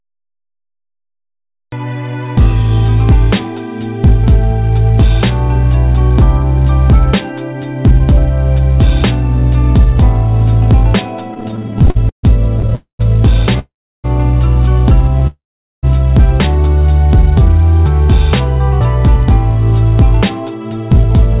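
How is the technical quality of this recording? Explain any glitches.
Technical quality is held back by a late start and a rough patch in the back half where playback stalls and freezes, all heard through a band that stops at 4 kHz, which points to a G.711 A-law call link at 64 kbps.

Cut-off start: the first 1.72 s is pure digital silence, then audio jumps in mid-sound at 1.72 s with no attack or fade. Capture or the stream simply began late, so whatever was already happening gets chopped off abruptly.

Repeated stalls (stutter): from 11.34 to 12.73 s, playback keeps catching: 21 small gaps, the longest 140 ms, filling about 28% of that stretch. Packets were arriving late, so the jitter buffer kept running dry and stretching the last sound. Nothing's lost, but it drags and stutters.

Call audio freeze: three of these, at 12.75 to 13.01 s (0.24 s), 13.59 to 14.06 s (0.45 s), and 15.27 to 15.85 s (0.56 s). 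The likely cause is packets held up in transit, leaving the buffer empty. You hear the last sound smeared into a fading buzz or hiss, then silence for about 130, 340, and 440 ms respectively, before the audio resumes where it stopped, just delayed.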